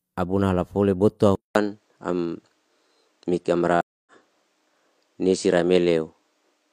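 Input switched to a poorer device at 1.35 s in this speech clip, right after "abuna halafole bot'to". After a 0.2 s silence the sound turns duller, with nothing above 9.1 kHz, a level shift of a few dB and a new, faint noise floor, likely from a change of microphone. Stream reconnect from 3.81 to 4.12 s: the audio drops out for about 0.25 s, then a fresh decoder resumes it roughly a third of a second further on, skipping that stretch.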